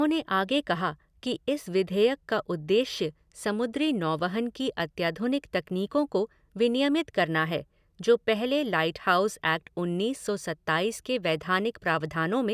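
No technical faults turn up anywhere in this speech recording. There is nothing here to place on a timeline.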